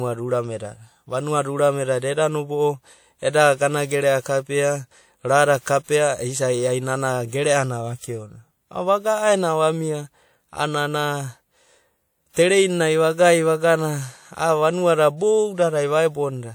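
At 5.61 s and again at 5.84 s, two sharp onsets in the speech are each preceded by pre-echo, a short hiss lasting about 50 ms (51 ms and 49 ms). The transform codec spread quantisation noise across each block, so the noise sized for the loud attack leaked into the quiet interval before it. Each attack sounds softened and smeared, with the hiss arriving just ahead of the transient.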